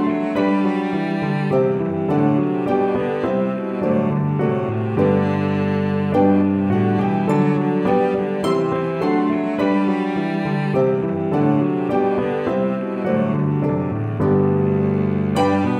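Nothing stood out as technically wrong on listening to the audio.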